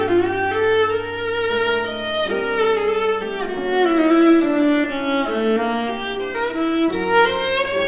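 Nothing goes wrong here: the sound comes over a call link whose codec leaves nothing above 4 kHz, which fits G.711 mu-law at 64 kbps, and no faults turn up anywhere along the way.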